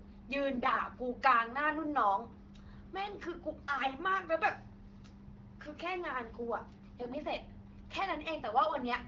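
Speech coded with AMR wideband, which sounds like the 12.65 kbit/s mode, and it gets hit by AMR bit errors in four short bursts: 0.56 to 0.79 s, 3.77 to 3.94 s, 7.01 to 7.16 s and 8.69 to 8.77 s. In each one the voice holds roughly its pitch and level but goes hoarse and gargly, because corrupted weakly protected bits scatter the excitation pulses and nudge gain and spectral values off. The first burst is the roughest, with errors around one bit in ten.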